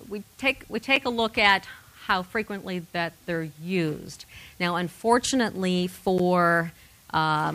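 Two blocks of digital silence interrupt the audio, at 0.96 s (about 6.7 ms) and 6.18 s (about 11.6 ms; its length fits a 512-sample buffer). Each cuts abruptly to silence and back, and being under about 15 ms, each is heard as a tick or dip rather than a gap, consistent with output buffers not being filled in time.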